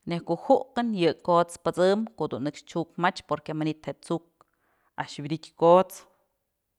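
From 4.98 to 5.90 s the speech slows by 5.5% and drops nearly a semitone, then snaps back: likely a drift correction step in clock-matching software.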